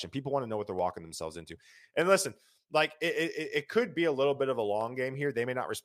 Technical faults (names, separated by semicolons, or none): dropped samples